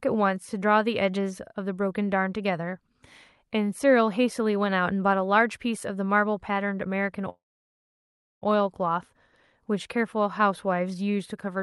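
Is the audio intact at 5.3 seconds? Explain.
Yes, the speech at 5.3 seconds is intact, with no dropout, glitch or other fault at that moment.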